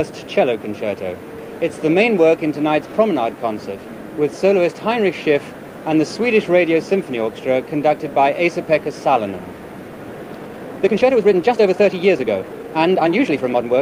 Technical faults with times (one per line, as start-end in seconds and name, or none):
10.34-13.81 time-stretched section